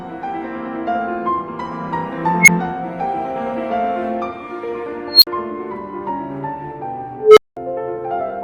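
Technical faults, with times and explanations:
2.40–2.48 s, unstable filter: a tone near 2 kHz swells over about 76 ms until it clips, then drops out for 5 ms as the feedback filter's runaway values overflow and reset.
5.07–5.27 s, unstable filter: a squeal around 4 kHz builds for 150 ms to clipping, followed by a 50 ms silence.
7.17–7.57 s, unstable filter: a low tone near 400 Hz grows for 195 ms to clipping, then 200 ms of silence before the filter recovers.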